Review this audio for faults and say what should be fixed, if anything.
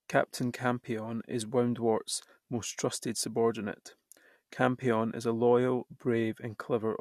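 Nothing in the signal needs fixing: levels, continuity and timing hold steady throughout the speech, with no audible defect anywhere in the recording.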